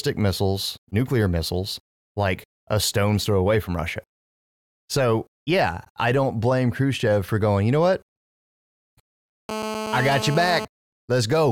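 GSM phone buzz, 9.49 to 10.65 s, over the speech: a steady, raspy 217 Hz buzz about 8 dB down, as the audio circuitry rectifies a nearby phone's call bursts.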